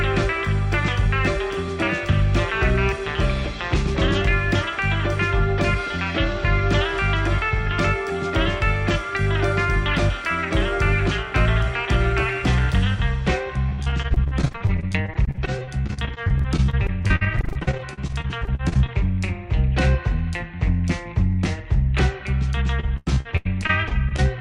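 From 13.69 to 18.9 s, repeated packet loss (robotic sound) chops the audio with dozens of short holes, none longer than 50 ms. Each is patched by stretching the previous sound, so about a quarter of the stretch is synthetic, giving a choppy quality with pieces missing. On a spectrogram this shows as frozen, smeared frames with abrupt vertical seams. The same fault returns from 22.8 to 24.2 s with fewer but longer holes, up to 96 ms.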